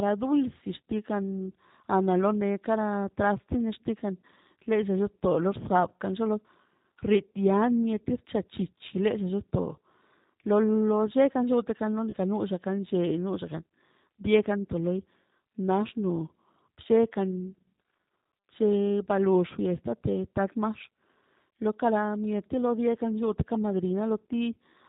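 Throughout, the speech passes through a G.729 codec at what sounds like 8 kbit/s, cutting everything above 4 kHz and leaving the voice plainly rough, thin and synthetic. At 12.10 to 12.14 s, VoIP packet loss concealed by the speech codec drops about 30 ms of audio, which fits a single lost packet. The decoder stretches the last sound into a brief, fading smear, and the voice stays weak or distorted for tens of milliseconds after.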